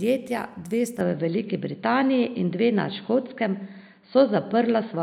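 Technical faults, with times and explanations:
1.01–5.02 s input switched to a poorer device: recording likely jumped to a narrower device, cutting everything above 4.6 kHz, so speech abruptly turns dull and boxy, slightly shifted in level, over faint new noise.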